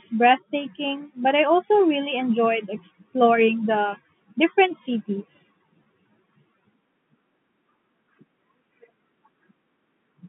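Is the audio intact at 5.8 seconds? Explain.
No. Packet loss with pitch repetition at 5.84–5.86 s, just after "exploring the different cities": a lost 20 ms stretch is filled by repeating the last pitch period, giving a slightly held, buzzy sound.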